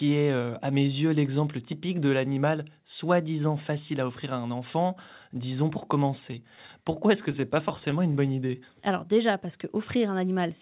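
Repeated stalls (stutter) run from 6.08 to 8.51 s, starting right after "un enfant disons pour". Packets kept arriving late, so the jitter buffer ran dry about twenty times. Each time, the receiver stretched the last sound to bridge the gap, the longest about 16 ms, filling roughly 0.2 s in all. No speech is lost, but the phrase judders and drags, with concealment making up about 9% of that stretch.

A jitter buffer slow-down follows from 8.52 to 10.03 s. The buffer was still short of reserve, so the receiver rebuilt it by repeating single pitch periods and slivers of pauses, adding about 90 ms. Speech here plays at 94% speed with the pitch unchanged, so syllables sound drawn out. Throughout, nothing is heard above 4 kHz, which fits a narrowband call codec such as G.711.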